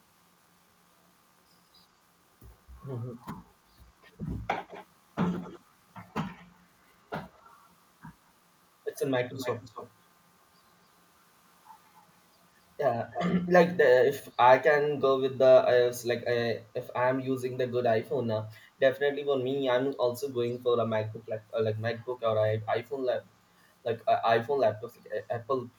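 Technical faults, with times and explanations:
4.67–4.86 s, 5.41–5.61 s and 7.33–7.4 s, echo leak: the far end's echo canceller likely failed to subtract its loudspeaker's output from its microphone, so the speech returns 187 ms late, as short scraps about 20 dB down, and barely audible at 7.33 s.
9.37–9.92 s and 13.1–13.21 s, echo leak: the residue arrives 271 ms late and louder, roughly 10 to 15 dB below the speech.
14.25–14.33 s, echo leak: a faint scrap 314 ms behind.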